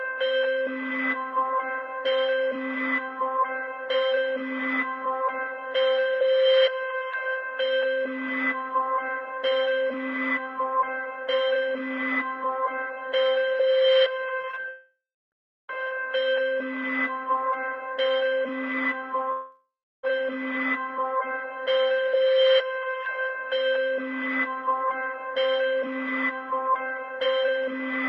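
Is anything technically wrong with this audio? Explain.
Yes. From 14.41 to 14.66 s there is repeated packet loss (robotic sound). Four short gaps, the longest 37 ms, were patched by stretching the preceding sound, so about a third of that span is synthetic. It sounds choppy. On a spectrogram it shows as smeared, repeated harmonic slices, and the waveform has abrupt discontinuities.

Two long network dropouts follow, at 14.70 to 15.34 s and 19.32 to 20.05 s. In each, roughly 0.6 to 0.7 s of audio never arrives, likely because of a network outage. A fading buzz continues the last sound, then about a third of a second of silence follows. On a spectrogram this is a blurred, decaying band and then an empty gap, and the waveform goes flat before the audio resumes.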